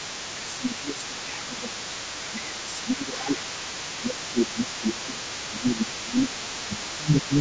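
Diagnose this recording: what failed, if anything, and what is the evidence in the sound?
Other side's voice leaking through, 0 to 1.23 s and 1.42 s to the end: a second voice sits about 15 dB under the speech, likely residual echo the call's echo canceller missed.

Speech suppressed in double talk at 0.31 to 1.97 s, 2.19 to 3.44 s, 3.83 to 6.38 s and 6.66 s to the end: the talker dips up to about 15 dB, likely the canceller ducking both sides.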